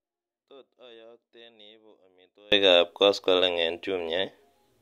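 From the start to 2.52 s there is an audio dropout to a faint residue. Only a faint leak remains, roughly 30 dB down. The feed was likely lost upstream while the path stayed live.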